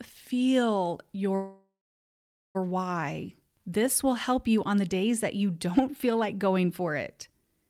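Speech with a call audio freeze from 1.35 to 2.57 s: the sound stalls into a fading buzz, then about 0.8 s of silence, likely from delayed packets draining the jitter buffer. Unlike a dropout, speech resumes exactly where it stopped and nothing is lost.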